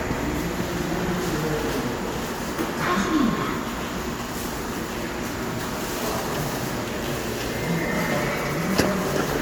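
Everyday sounds, with no technical faults to be heard.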